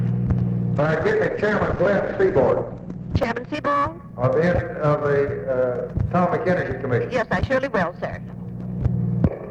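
From 0.76 s to 3.6 s, a call bitrate drop pushed the encoder from 64 to 10 kbps, cutting the bandwidth from 20 kHz to 8 kHz, so the sound turns coarse and muffled. At 3.23 s, a repeated buffer replays one tiny slice twice more, heard as a brief click or buzz consistent with a 64-sample buffer, with essentially nothing lost.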